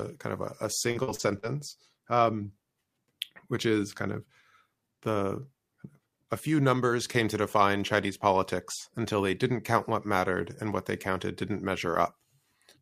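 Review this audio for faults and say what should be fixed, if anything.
Repeated packet loss (robotic sound) runs from 0.91 to 1.45 s, right after "kind of a a". Four short dropouts, the longest 44 ms, were patched by stretching the preceding sound, so about 29% of that stretch is concealed, making it choppy with pieces missing. A larger jitter buffer and forward error correction on the network link would prevent it.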